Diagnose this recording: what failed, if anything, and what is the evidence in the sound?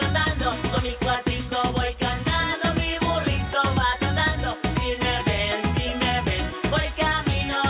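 Nothing failed; no faults heard.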